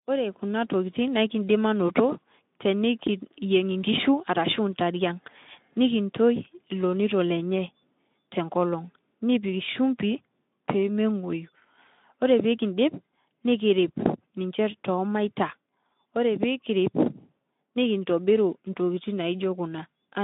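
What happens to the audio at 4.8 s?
At 4.8 s the speech carries on intact, with no dropout, glitch or other fault at that moment, just the steady narrowband sound of the Speex link it passes through.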